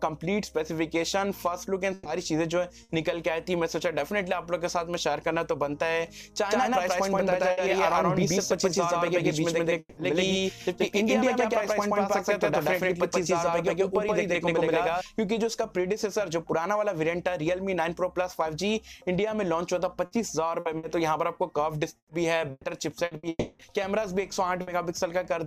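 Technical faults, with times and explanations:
1.93–2.08 s, 2.83–2.92 s, 7.51–7.60 s, 24.61–24.70 s, burst of packet loss: short holes of 60 to 120 ms are bridged by stretching the last sound into a brief buzz or hiss, then audio jumps ahead.
6.51–15.01 s, doubled audio track: a second full-strength copy trails about 150 ms behind, dry and cutting in and out abruptly, likely from a slower second capture path.
9.79–10.00 s and 23.29–23.62 s, long network dropout: the last sound is held and fades over roughly 180 to 300 ms, touching brief silence before audio returns with that stretch gone, likely from a network stall.
20.05–20.86 s and 21.97–23.26 s, repeated packet loss (robotic sound): three then four gaps, up to 120 ms each, are patched in quick succession, giving choppy audio with pieces missing.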